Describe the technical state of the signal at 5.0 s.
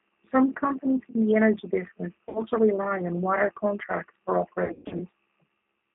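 At 5.0 s the sound sits inside a stretch of VoIP packet loss concealed by the speech codec, running from 4.64 to 5.03 s. About 240 ms went missing, scattered over 360 ms with gaps of up to 120 ms, which fits eight lost 30 ms packets. The decoder filled each gap by repeating its last pitch and vocal tract filter at falling gain, so the sound turns into a fading buzz or coloured noise rather than dropping to silence or clicking, as a plain dropout would.

Underneath, the G.729 codec colours everything. The line passes only about 200 Hz to 3.5 kHz, and the model rebuilds speech from a filter, a pitch predictor and a few pulses per subframe, consistent with 8 kbit/s G.729A. That gives a rough, slightly synthetic grain that is clearly audible. Simple band-limiting alone would sound muffled but clean. Because each frame builds on the previous one, the smeared, weakened quality near 5.0 s lingers briefly after packets return.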